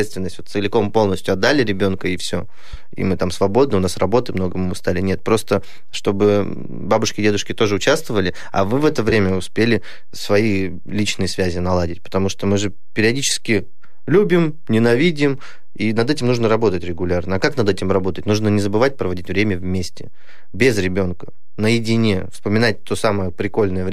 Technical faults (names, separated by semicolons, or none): DC offset; AAC frame loss with concealment